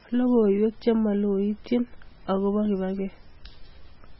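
Throughout the speech, nothing is heard above 5.6 kHz. The sound is watery and swirling, and attacks smear. This is likely heavy MP3 compression. The encoder cut the treble and dropped weak frequency lines frame by frame, which fits a very low bitrate near 16 kbps.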